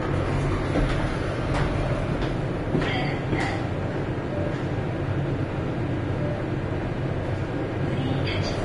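From start to finish the top end stops dead at about 10.6 kHz, and what's left of the treble sounds hissy and grainy, with tones roughened and attacks smeared. That's likely Vorbis compression at a low bitrate, somewhere around 30 kbps judging by how plainly the damage comes through. The codec has cut the bandwidth and quantised the upper residue so coarsely that the fine detail there has turned into noise of roughly the same energy.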